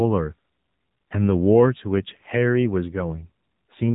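From start to finish the speech sounds thin, boxed-in and telephone-like, with a buzzy, synthetic edge to the voice and nothing at all above about 3.8 kHz. This is the AMR narrowband mobile codec, AMR-NB, at work: the audio was squeezed through 8 kHz sampling and rebuilt from a vocal-tract model fed with a handful of pulses per short frame. The plainly audible coarseness fits a low setting around 7.4 kbps.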